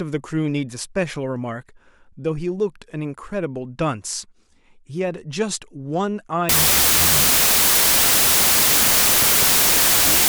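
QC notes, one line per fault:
6.49–10.29 s, wrong sample width: from here to the end, the speech drops to half speed, roughly an octave lower, and sits under a loud hiss. That fits 32-bit samples being read as 16-bit. Each original sample gets split into two values. The upper half still carries the real waveform's top bits, and the lower half is basically random low-order bits, so every other value is noise. Doubling the sample count halves the playback speed.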